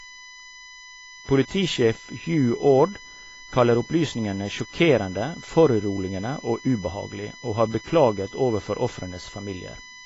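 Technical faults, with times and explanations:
throughout USB whine: a steady, fixed-pitch whine sits under the speech, built on 1 kHz with its strongest component at 2 kHz, about 20 dB below the signal. It comes from USB frame timing leaking through power or ground. A spectrogram shows flat horizontal lines at these frequencies.
throughout AAC compression: the speech sounds dull and smeared, with a warbling, fizzy edge on sibilants and nothing above 7.6 kHz. This is likely AAC-LC coding at a low bitrate around 24 kbps, quantising coarsely. A spectrogram shows a hard ceiling.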